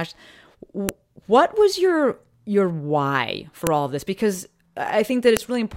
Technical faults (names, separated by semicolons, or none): file header played as audio